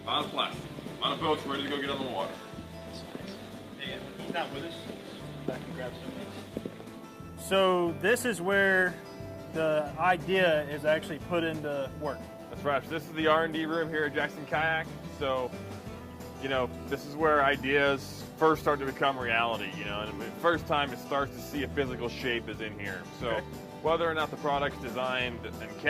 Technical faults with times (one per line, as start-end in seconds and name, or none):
none